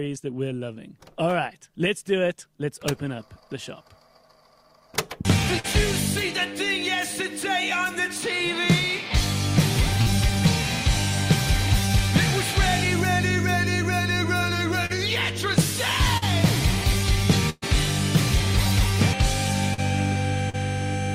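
Brief smears or wobbles, each a few hundredths of a second long, interrupt the audio at 5.59, 10.02, 14.86, 16.17, 19.74 and 20.50 s. This is short concealed packet loss. Each time, about 40 ms of audio arrived too late to be decoded, and the receiver bridged the gap by extending the preceding sound. At 17.50 to 17.64 s a longer held, fading stretch cuts out the sound, with a brief silence inside it. This is a burst of packet loss. About 120 ms went missing, and the concealment could only prolong and fade the last sound before playback resumed further on.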